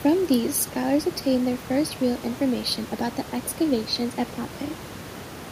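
Nothing stood out on listening to this speech clip, apart from some room noise sitting about 17 dB below the speech.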